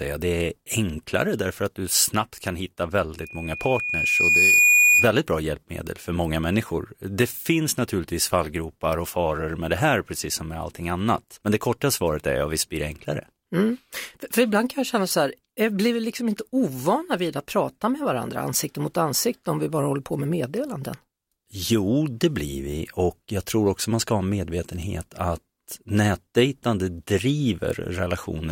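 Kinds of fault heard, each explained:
Loudspeaker feedback squeal: the microphone is picking up its own loudspeaker, and at 2.4 kHz the loop gain climbs past one, so that tone feeds itself. From 3.20 s, after "du snabbt kan hitta", a 2.4 kHz tone swells over about a second and a half to roughly 10 dB above the speech, then stops at 5.15 s before "bra hjälpmedel för många".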